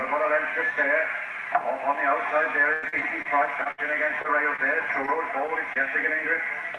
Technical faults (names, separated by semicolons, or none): repeated packet loss (robotic sound); lost packet rebuilt from error correction; short concealed packet loss